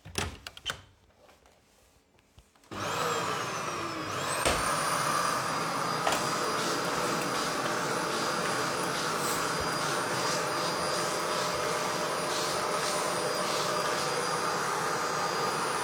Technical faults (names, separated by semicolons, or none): none